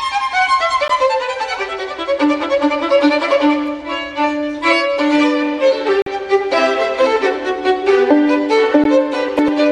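At 0.88 s, 6.02 to 6.07 s and 8.84 s the sound cuts to silence for about 14.5 ms, 43.5 ms and 14.5 ms, likely a Bluetooth dropout. The lengths fit one, three and one lost packets. Each gap is a blank in the waveform and spectrogram, and the sound resumes as if it had played on.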